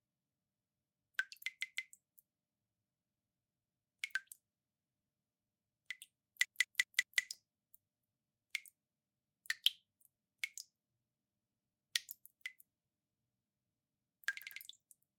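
Repeated frames stutter through three spots. At 1.62 s a 160 ms block plays two extra times, at 6.45 s a 192 ms block four extra times, and at 14.42 s a 96 ms block two extra times. Chunks of encoded sound were duplicated, adding 1.28 s overall.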